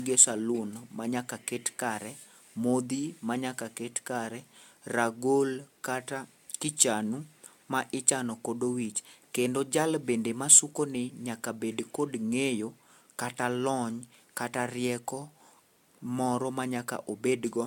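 The speech has likely been through repeated lossy AAC-LC encoding, decoded and re-encoded about three times at a rate consistent with 96 kbit/s. This generation loss runs throughout: each pass adds fresh quantisation noise on a shifted frame grid, leaving a swirly, hollow, smeared sound with blurred attacks.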